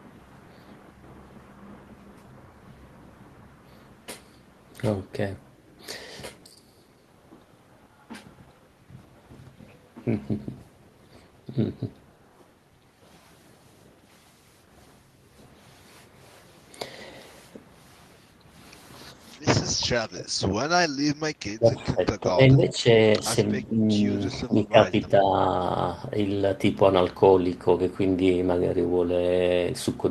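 An echo canceller likely mistook the talker for loudspeaker echo while both sides spoke, producing speech suppressed in double talk at 19.8–20.38, 21.57–22.01, 22.2–22.86, 23.19–23.24, 23.69–24.05, 24.4–24.94 and 25.21–25.33 s. The speech dips by about 20 dB at first, then by shallower amounts of roughly 5 to 15 dB.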